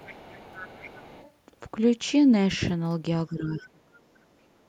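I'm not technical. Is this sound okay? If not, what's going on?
No. Two problems stand out.

Other side's voice leaking through: from the start to about 1.3 s, the device on this end was most likely playing the other person through its loudspeaker, and the part meant to cancel that echo didn't remove all of it. You can hear a faint second voice under the main talker, well below it in loudness, so it sounds like someone quietly talking in the background.

Speech suppressed in double talk: between about 3.27 s and 3.81 s, both people were likely talking at once. The echo canceller couldn't tell the local talker apart from the echo, so it turned everything down. For roughly half a second the main voice drops sharply in loudness, almost disappearing, before coming back.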